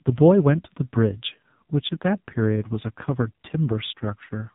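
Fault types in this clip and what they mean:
AMR narrowband mobile codec: The speech has been squeezed through the 2G/3G mobile codec, which resamples to 8 kHz and rebuilds the voice from a vocal-tract model excited by only a handful of pulses per 5 ms subframe. Everything above 4 kHz is gone for the whole clip, leaving a thin telephone tone, and the damage is heavy: a buzzy, synthetic quality throughout that fits one of the codec's lowest modes, around 5.9 kbps.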